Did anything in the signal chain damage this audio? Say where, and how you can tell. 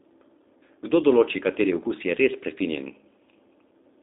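Yes. Throughout, the speech sounds thin, slightly rough and buzzy, with nothing above 3.7 kHz and little below 250 Hz. That points to the G.729 codec: an 8 kbit/s-class coder rebuilding each frame from a vocal tract filter, pitch predictor and sparse pulses.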